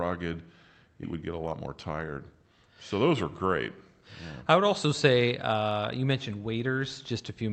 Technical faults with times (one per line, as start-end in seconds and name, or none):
1.03-1.05 skip ahead
1.13-2.03 jitter buffer speed-up